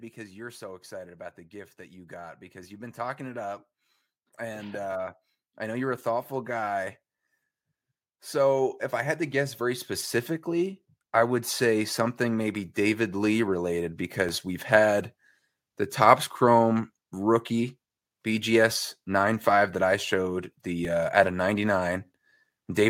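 Automatic gain rising happens three times: from 0.15 to 3.59 s by about 6 dB, from 4.19 to 6.93 s by about 5 dB, and from 10.46 to 14.73 s by about 5 dB. The gain control judged the input too quiet and raised it slowly. Speech and background swell together. During the last rise, at 14.29 s, comes a repeated buffer. A piece 2.67 ms long plays twice. That fits a 128-sample buffer. New audio arrived late, so the old piece played again. Its hard joins make a brief click. The same click recurs at 20.85 s, between "that I showed" and "uh at a". A few milliseconds of audio go missing each time.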